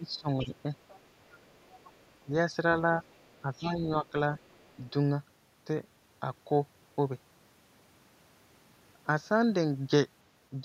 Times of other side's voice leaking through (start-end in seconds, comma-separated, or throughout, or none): 0.42-0.56, 0.88-1.00, 1.28-2.09, 3.06-3.42, 4.37-4.72